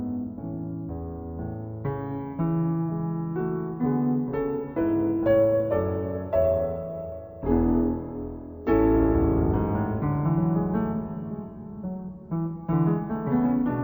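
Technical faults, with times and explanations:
Throughout: stereo read as mono. The music plays at half speed and a full octave low, 12 semitones down, because the interleaved left and right samples are being taken one after another as a single channel. Each stereo frame becomes two consecutive mono samples, so every moment lasts twice as long and every pitch halves. Alternating between two channels also folds a fainter mirror image of the sound into the upper half of the spectrum.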